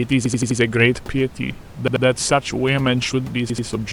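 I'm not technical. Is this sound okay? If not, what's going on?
No. There are three short stutters, called a repeated buffer. The same sliver of sound plays over and over because fresh audio arrived late. This happens at 0.26–0.60 s, 1.88–2.05 s and 3.50–3.67 s.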